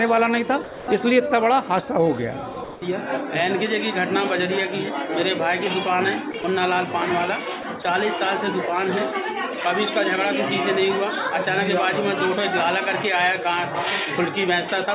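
At 0.64–0.88 s, 2.54–2.56, 2.64–2.82, 6.32–6.34, 6.42–6.44, 7.62–7.64 and 7.82–7.84 s, the sound briefly gives way to flat, steady hiss, likely sound dropped by the voice detector and filled with comfort noise. On a spectrogram these appear as uniform, featureless patches within a band that stops at 4 kHz.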